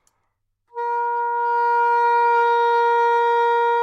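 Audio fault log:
No faults heard anywhere in the recording; nothing to log.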